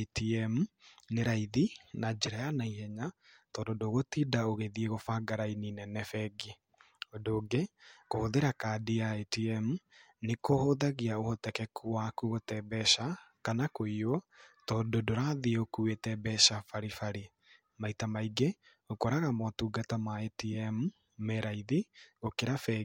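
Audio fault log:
2.25–2.28 s corrupt frame decoded: damaged bits in a single compressed frame were decoded anyway, putting energy at wrong frequencies, heard as a brief chirp, squeak, blip or burst of noise peaking around -20 dBFS.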